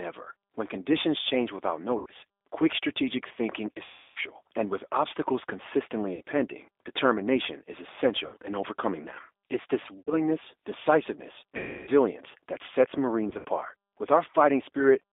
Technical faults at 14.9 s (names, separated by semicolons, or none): G.729 codec